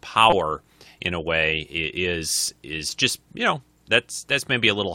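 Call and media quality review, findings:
Repeated buffer in speech at 0.30–0.33 s and 2.47 s: brief buzzy stutter. The playout device replayed its last 5.8 ms buffer (fits 256 samples) four, then two, extra times on underrun, losing about 20 ms and 10 ms. Waveform shows identical copies with hard joins. Spectrogram shows evenly spaced vertical stripes.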